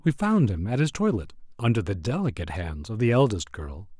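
Nothing goes wrong anywhere in the speech here, so there's no technical fault to walk through.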